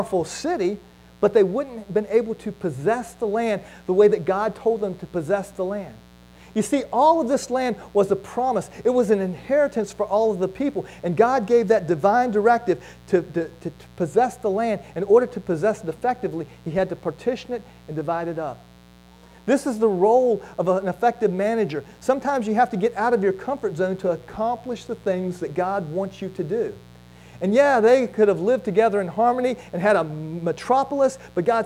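Mains buzz runs through the whole clip, a steady raspy layer sitting roughly 30 dB under the audio. Sharp switching spikes from a dimmer, rectifier or unshielded cable enter twice per 60 Hz cycle, stacking harmonics that climb well into the kilohertz range. A drift correction step hits from 24.18 to 25.44 s, where the sound slows by 5.32% and drops about 95 cents, nearly a semitone, before snapping back. This is likely clock-matching software abruptly changing the playback rate to rebalance its buffer.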